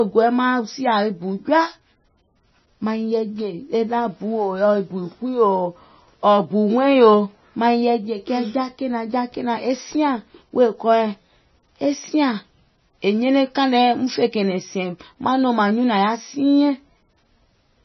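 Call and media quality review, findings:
Heavy MP3 compression, whole clip: speech swirly and watery, nothing above about 5.9 kHz. Likely a low bitrate, around 22 kbps, starving bands so weak lines flicker frame to frame.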